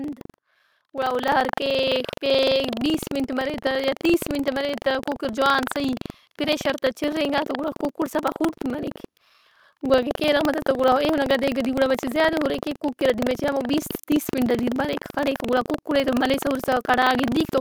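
A speech recording with two faults. Buffer tearing runs the whole length. A steady robotic buzz at 23.4 Hz sits on the sound whenever there is signal, which fits a 2048-sample buffer. In each period, a small slice of a few percent carries audio from roughly 150 ms earlier, spliced in with hard joins on either side. At 1.29 s, just after "گڑا او", the microphone volume is stepped up by about 4 dB in a single jump. Voice and background rise together, as when the input gain is raised at the device rather than applied to the voice alone.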